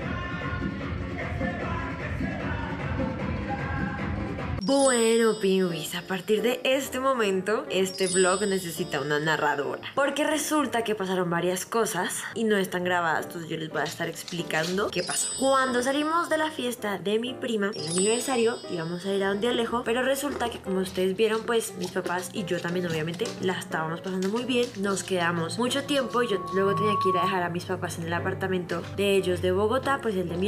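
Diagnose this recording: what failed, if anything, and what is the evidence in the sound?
There's loudspeaker feedback squeal at the analogue end, in the acoustic loop between mic and speaker. From 25.86 to 27.48 s a 1.1 kHz tone swells over about a second to a few dB above the sound. Loop gain at that frequency tipped past one and it fed itself.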